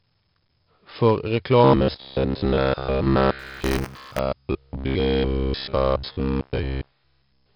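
Speech, and the whole clip carries heavy 4-bit ADPCM compression: gritty hiss riding on every loud syllable and rough attacks. From 1.64 s to 7.55 s there's robotic sound from repeated short buffers, a rigid metallic buzz locked at 66.7 Hz. It's likely audio arriving too slowly, with roughly 15 ms chunks looped over most of the real signal. On top of that, buffer tearing between 3.39 s and 4.19 s adds a rattle at 188 Hz. That fits a 256-sample buffer where a small slice of each period holds audio from about 20 ms earlier.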